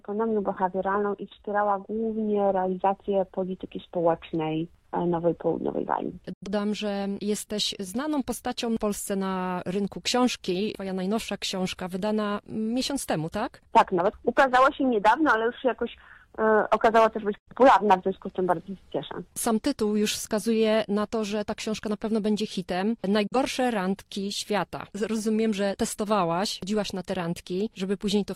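At 6.33 to 6.48 s, 17.38 to 17.53 s and 23.27 to 23.37 s the sound briefly mutes in a digital broadcast dropout: the receiver stopped getting decodable frames, faded out over about 8 ms, and resumed once good frames returned. The lost stretches are about 85 ms, 85 ms and 43 ms, which fits whole frames of about 43 ms being discarded. The programme material in those gaps is simply gone. On a waveform each shows as a short ramp to a flat line; a spectrogram shows a clean vertical blank band across all frequencies.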